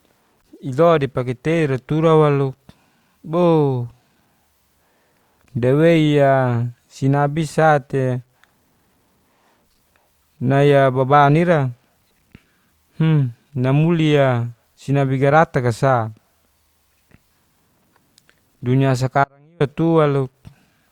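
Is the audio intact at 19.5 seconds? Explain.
No. From 19.24 to 19.60 s the signal was most likely lost for about 360 ms while the path after the break stayed live, an audio dropout to a faint residue. The sound cuts out abruptly and the gap holds only a faint leak, about 35 dB below normal level. Underneath, the audio was likely truncated to about 10 bits without dither, so the rounding error tracks the signal. This low bit depth without dither gives a grainy, signal-dependent distortion roughly 50 dB down, most noticeable on quiet passages.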